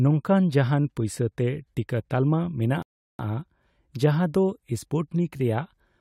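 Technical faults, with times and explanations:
2.82–3.19 s, rebuffering stall: the player ran out of downloaded audio and waited for more, so the speech falls silent for 367 ms, then resumes exactly where it stopped.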